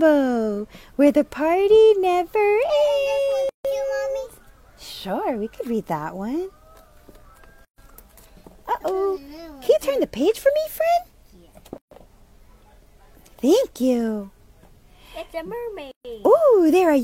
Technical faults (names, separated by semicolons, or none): gap at a join of encoded pieces